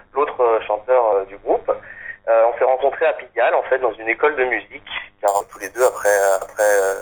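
From 5.28 s to 7.01 s, imaging from sample-and-hold upsampling appears: the sound seems to come from an 8 kHz original held sample by sample without smoothing. A metallic fizz fills 4 to 8 kHz at about 16 dB down. Unlike steady hiss, it tracks the sound's level and mirrors its pitch movement.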